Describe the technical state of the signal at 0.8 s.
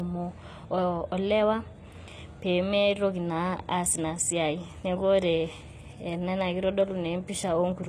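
At 0.8 s, as throughout the clip, the speech was likely squeezed through a low-bitrate codec, something like 24 kbit/s HE-AAC, then saved again as high-bitrate MP3. That is low-bitrate audio saved at a high bitrate: nothing is present above 14.9 kHz, and the first encoding's losses remain unrestored.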